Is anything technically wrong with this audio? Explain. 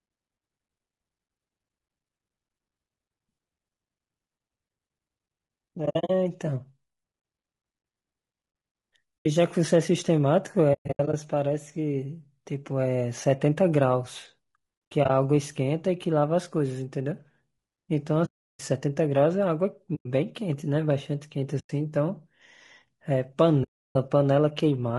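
Yes. The speech sounds rough and grainy throughout, with noise between the harmonics and a synthetic top end. That's likely low-delay AAC compression (AAC-ELD) squeezed to around 32 kbps, whose short frames resolve pitch poorly.

There's also AAC frame loss with muting: soft-edged holes where lost frames were zeroed and faded out and back in. They fall at 5.85–6.10, 9.20–9.26, 10.73–11.14, 14.91–15.10, 18.25–18.60, 19.95–20.06, 21.59–21.70 and 23.63–23.96 s. The gaps are consistent with 20 ms frames.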